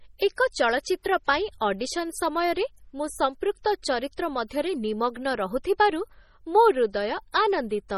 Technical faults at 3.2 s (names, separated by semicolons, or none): MP3 compression